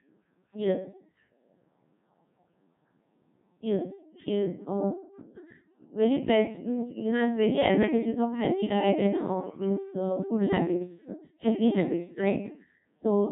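The whole recording runs through the Codec 2 vocoder, with heavy damage. The speech is rebuilt from sine waves driven by pitch and envelope data, so it comes out robotic and buzzy. Nothing survives above 3.8 kHz, and the thin texture fits the 1.6 kbit/s mode.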